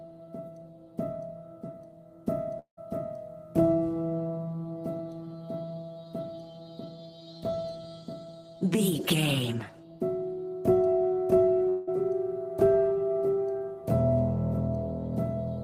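Long network dropouts at 2.59–2.79 s and 11.69–11.89 s, each likely from about 180 ms of audio lost in transit. The gap is filled by a decaying buzz continuing the last sound, fading into about 100 ms of silence in the first case. The sound then resumes with that stretch missing.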